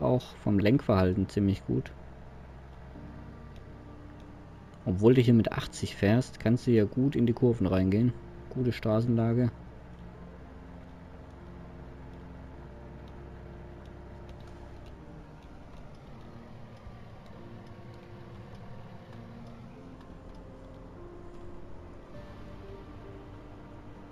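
A faint metallic shimmer on the brightest sounds throughout, with a dulled top end: imaging from linear upsampling, which fits 16 kHz audio raised to 44.1 kHz, leaving mirrored images between 8 and 16 kHz.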